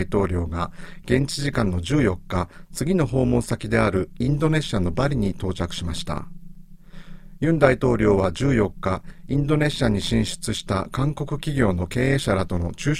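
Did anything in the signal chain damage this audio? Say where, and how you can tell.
Yes, and it's there for the whole length of the speech: overlap-add ripple, most likely from a frame-based processing stage in call processing. The level pumps by about 11 dB at a rate of around 150 Hz, which comes across as a metallic buzz with extra tones around the voice on everything. That happens when audio is chopped into windowed frames and stitched back together with windows whose overlap doesn't sum to a flat gain, so loudness swells and dips once per frame.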